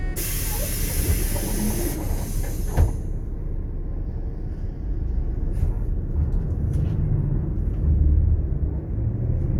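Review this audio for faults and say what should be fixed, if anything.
Nothing here needs fixing: the sound in this clip has no audible technical defects at any point.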